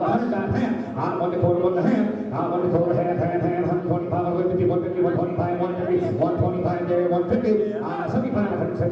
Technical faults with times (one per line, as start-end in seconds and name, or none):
none